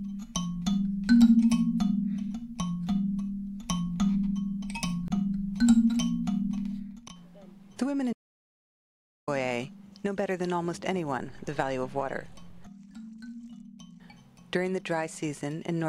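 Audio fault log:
8.13–9.28 s, audio dropout to silence: the sound stops abruptly mid-flow and resumes 1.14 s later, with no room tone in between, likely from a lost input while recording continued. The waveform shows a flat, near-silent line; the spectrogram, a fully blank vertical band.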